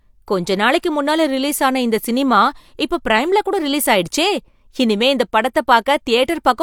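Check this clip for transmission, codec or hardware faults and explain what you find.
Nothing turns up here worth flagging; the speech comes through steady and whole, with no glitches or trouble anywhere along the way.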